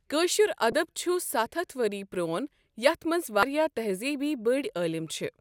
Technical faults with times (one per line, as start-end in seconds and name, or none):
0.72 damaged data in a compressed stream
3.40-3.43 damaged data in a compressed stream